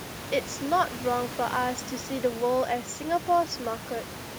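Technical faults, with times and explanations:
No technical faults are present; the only background is room noise at about 14 dB below the speech, which belongs to the recording itself.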